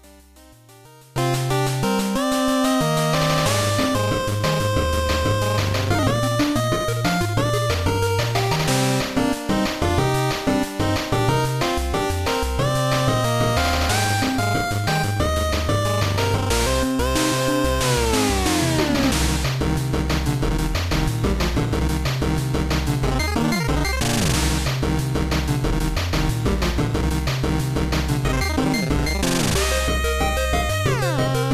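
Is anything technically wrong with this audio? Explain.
Yes. From 0.00 to 1.16 s the sound drops by about 26 dB and returns to full level afterward. The likely cause is one channel inverted: with reversed polarity on one side, the shared content cancels in the mono sum, leaving only the residual difference between channels.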